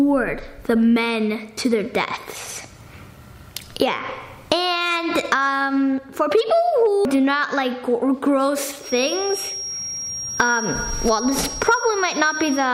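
From 8.78 s to the end at 12.73 s, a feedback whistle sits behind the sound. It is a thin, steady tone at 5.6 kHz. It swells and fades slowly in level. It stays roughly 10 dB below the main signal, so it never runs away or takes over. The likely cause is a loudspeaker-to-microphone loop held just at the edge of feedback. One high frequency keeps ringing instead of dying out.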